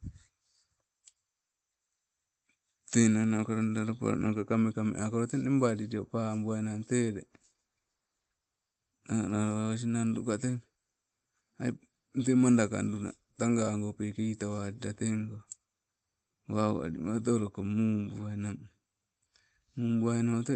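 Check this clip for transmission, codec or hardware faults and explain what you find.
No faults found in transmission.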